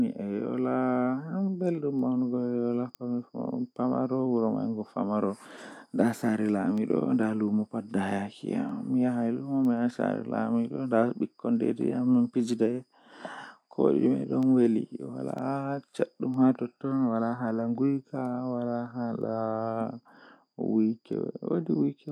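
From 1.04 s right through to 22.09 s you get word clock ticks, roughly one a second, around twenty in all. The receiving device's clock drifts against the sender's by something like 20 ppm, so each slip drops or repeats a single sample and leaves a sharp tick over the speech.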